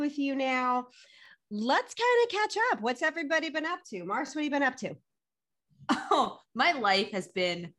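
Overlapping chunks at 1.26–1.28 s after "you now", 4.28–4.30 s after "everybody been up to", and 7.30–7.32 s: every 3-second chunk repeats the last 20 ms, heard as a brief stutter.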